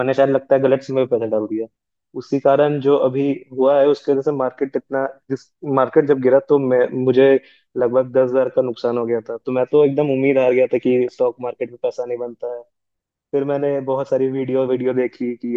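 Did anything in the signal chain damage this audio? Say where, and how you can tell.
No, nothing in this speech recording stood out as damage from any stage of the chain when I listened to it.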